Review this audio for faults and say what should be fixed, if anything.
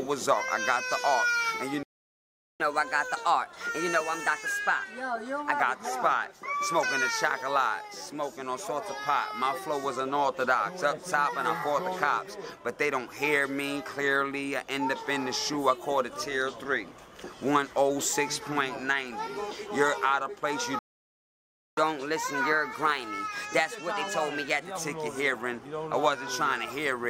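Playback stall at 1.83–2.60 s and 20.79–21.77 s: the sound stops dead mid-flow, falling silent for 0.77 s and then 0.98 s before resuming. The likely cause is that the player's buffer ran dry or its audio thread was blocked.

Catch-up at higher speed follows each gap. From 2.60 to 5.60 s the sound runs at 1.15 times normal speed, roughly two semitones sharp. From 21.77 to 24.77 s it runs at 1.1 times, about a semitone and a half sharp. In both cases the player is resampling its backlog to win back the lost time, then dropping to normal rate.

Enlarge the playback buffer and keep the audio thread free of blocking work so it never runs dry, which removes both the stalls and the audible speed-up that follows them.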